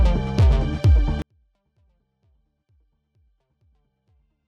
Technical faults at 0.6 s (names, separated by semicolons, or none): none